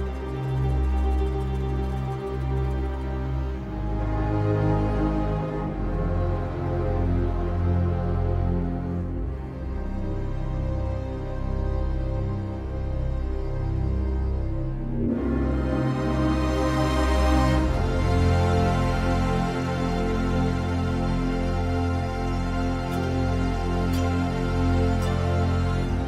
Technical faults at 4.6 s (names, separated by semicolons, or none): none